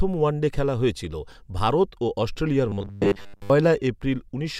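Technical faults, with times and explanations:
2.69 to 3.50 s, robotic sound from repeated short buffers: the speech becomes a rigid, metallic buzz fixed at 100 Hz, loosely following the words. This is likely audio arriving too seldom, so a 10 ms slice is looped, replacing most of the real signal.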